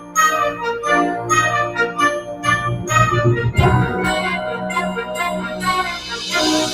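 Noise suppressor applied to music or sounds, throughout: a speech-tuned suppressor mistakes steady tones and tails for noise, swinging level by around 10 dB, so the sound pumps and thins.

Sound cut by the noise suppressor, at 0.00–0.16 s, 2.21–2.45 s and 5.46–5.63 s: sustained or fading material dips by about 12, 9 and 6 dB respectively, while sharper onsets still get through.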